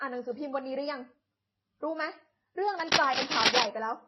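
Speech with a dull, smeared quality all the way through: nothing above 5.9 kHz survives, and swirly, watery artefacts sit over a grainy roughness. That mix points to transcoding between lossy codecs, likely an MP3 pass near 24 kbit/s, then AAC-LC, then Vorbis, each adding its own damage. From 2.80 to 3.65 s a dense, uneven scratching and rustling runs over the speech, somewhat louder than the speech itself. This is cable scratch noise, likely from a worn cable or connector being moved so its contact resistance jumps around rapidly.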